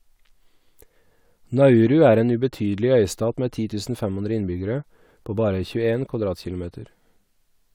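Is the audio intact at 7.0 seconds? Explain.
Yes, the speech at 7.0 seconds is intact, with no dropout, click, distortion or other fault heard at that moment.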